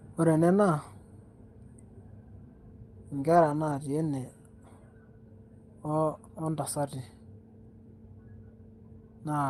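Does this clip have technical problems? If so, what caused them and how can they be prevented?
Yes. Between 3.13 and 3.75 s the speech turns rougher and noisier without any gap: a lost packet rebuilt from error correction. Opus decoded low-bitrate copies carried in the following packets, about 320 ms in total, which fits 16 separate packet losses. Reducing network congestion and loss, for example through a wired connection or prioritising the call's traffic, would prevent it.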